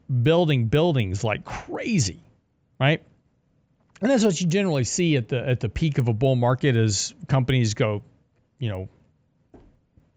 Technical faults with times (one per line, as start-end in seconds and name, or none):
0.00-10.16 resampler restarted on every block